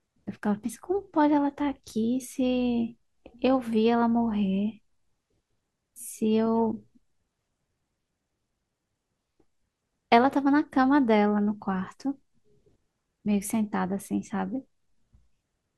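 Dropped samples at 10.98 s produce a single sharp click in the speech, brief enough that nothing audible is lost. The likely cause is a sample or so going missing from the stream, a tiny fraction of a millisecond, so the waveform jumps straight from one value to a later one instead of moving smoothly between them. That abrupt step is what the ear catches as the click, and it would show as a thin vertical line across the spectrum at that moment.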